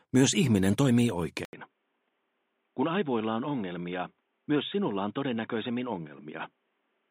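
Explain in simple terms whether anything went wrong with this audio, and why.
At 1.45 seconds there is a short gap of about 80 milliseconds. After it, the sound turns dull and noticeably quieter, with nothing above 3.8 kHz and a faint new background hiss. This lasts to the end. The likely cause is an input switched to a poorer device.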